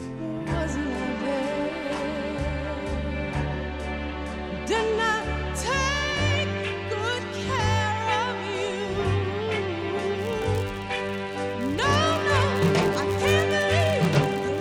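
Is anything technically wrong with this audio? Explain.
Yes. From 10.17 s to the end, the audio carries a filter restarted on every block fault. The filter discards its internal state at each block boundary and processes every block as if starting from silence, so each block opens with a small transient. These transients repeat 100 times per second, which points to blocks about 10 ms long, and they are heard as a steady 100 Hz buzz riding on the sound that grows louder and quieter with the signal's level.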